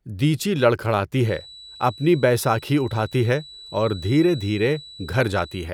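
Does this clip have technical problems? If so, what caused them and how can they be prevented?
Yes. A feedback whistle near 3.9 kHz runs from 1.15 s to the end, about 20 dB under the speech. The likely cause is a loudspeaker-to-microphone loop hovering at the edge of feedback. Lower monitor gain or move the microphone away from the speaker.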